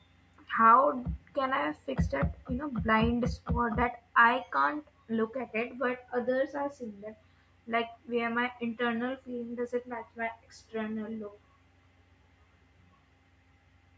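No technical faults can be heard in the speech, which carries the ordinary shaping of a call's microphone processing, with the lowest bass trimmed away and nothing above 8 kHz.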